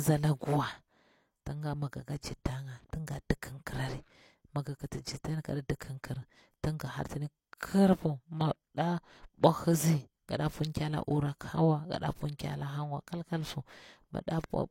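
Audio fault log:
5.79 s pre-echo: a brief hiss smears in just before a sharp onset in the speech, codec quantisation noise spreading about 11 ms ahead of the attack.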